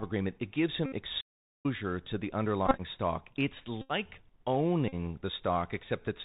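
The whole clip is speech through the Bluetooth CVSD headset codec. Nothing above 4 kHz survives. S sounds turn scratchy, and a granular hiss sits underneath.

From 0.86 to 0.92 s comes a Bluetooth headset packet repeat. Lost packets are replaced by the last one, giving a steady buzz near 267 Hz.

From 1.20 to 1.66 s there is a playback stall. The sound cuts out for about 0.43 s before "to the", likely because the player ran short of data.

After "to the", from 2.66 to 2.81 s, scattered repeats add brief buzzy fragments. Further packet repeats buzz at 3.81 to 3.91 s and 4.88 to 4.94 s.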